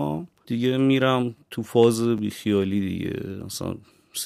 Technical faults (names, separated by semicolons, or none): chunks out of order